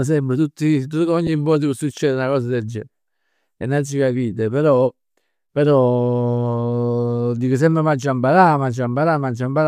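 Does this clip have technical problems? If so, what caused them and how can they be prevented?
Yes. Lost LE Audio frames cause a brief noisy blip at 1.27 s, just after "tutti tutt". About 10 ms drops out, which fits one lost frame. The decoder refills it with the previous spectrum under random signs. A strong, interference-free Bluetooth link prevents this.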